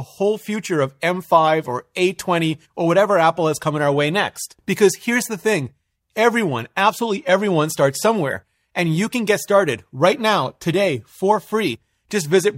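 No technical faults are audible.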